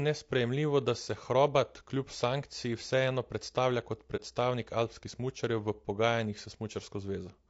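Speech recording carrying plainly audible low-delay AAC compression throughout, most likely AAC-ELD at a rate that fits about 32 kbps. Its short transform frames separate the pitch harmonics poorly, so the voice sounds rough and grainy, with noise filling between harmonics and a thinned, synthetic upper band. At 4.16 to 4.20 s, right after "sankciji vseeno predstavlja kot", there is AAC frame loss with muting. Roughly one frame's worth of audio, about 30 ms, drops out, and the overlapping windows fade it out and back in, leaving a brief dip.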